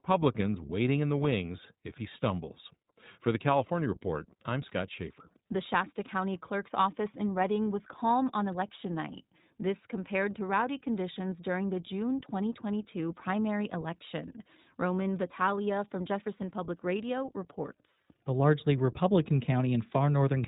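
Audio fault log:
throughout: iLBC codec. Muffled, band-limited sound with nothing above 4 kHz and a plainly rough, synthetic edge, consistent with iLBC's 20 ms frame mode at 15.2 kbps.
16.38–16.42 s: lost iLBC frames. A brief held, slightly buzzy vowel as about 20 ms of audio is replaced by a repeated pitch cycle mixed with noise, then recovers at once.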